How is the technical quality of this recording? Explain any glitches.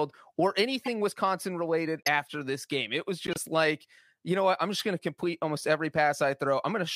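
The speech is marred by four corrupt frame decoded glitches, at 0.81–0.88 s, 1.99–2.08 s, 3.27–3.39 s and 4.79–4.82 s. In each, a compressed frame with flipped bits was decoded anyway, so misread gains and codes put energy at the wrong frequencies for a few frames. The result is short chirps and noise bursts peaking near -20 to -15 dBFS.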